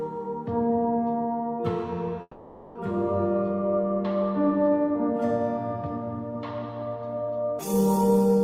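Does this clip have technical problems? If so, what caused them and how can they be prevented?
Yes. From 2.21 to 2.77 s there is a long network dropout, likely caused by the audio stream stalling so that no packets reached the receiver for over half a second. The receiver keeps extending the last sound as a fading buzz or hiss for about 540 ms, then about 30 ms of silence follows before the audio resumes further along, with that stretch gone. A jitter buffer with more headroom, forward error correction, or a more stable connection would prevent this.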